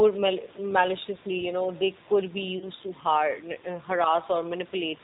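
Throughout, the speech passes through the G.729 codec at 8 kbit/s, and the damage is plainly audible. Nothing above 4 kHz survives, and the voice has a rough, slightly synthetic grain because each 10 ms frame is rebuilt from a vocal tract filter, a pitch predictor and a few pulses. A simple low-pass filter would only dull the sound. This roughness sits inside the voice itself, separate from the room noise, which lies about 21 dB below the speech.

From 2.58 to 2.69 s there is VoIP packet loss concealed by the speech codec. With packets missing, the decoder extended its last pitch and filter into a buzzy tone or coloured noise that fades, which fits about three lost 10 ms frames. A hard dropout would leave silence or a click. Here the gap is filled with sound, and the voice stays weak for a moment after the packets resume.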